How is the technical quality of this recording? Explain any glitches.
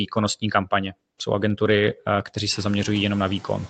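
One processing fault runs through the whole recording. The sound stops at 8 kHz, and room noise rises by about 19 dB around 2.5 s.

Noise suppressor artifacts are present throughout. The suppressor lowers steady noise frame by frame, by about 22 dB. The noise sinks in pauses and swells back under the speech.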